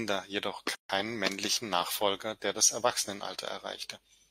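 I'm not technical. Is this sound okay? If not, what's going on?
No. At 0.75 s the speech drops into a sudden silence of about 146 milliseconds, ending at 0.90 s, then resumes where it stopped. This is a gap at a join of encoded pieces: the recording was encoded in separate sections, and the padding silence from that process was never trimmed.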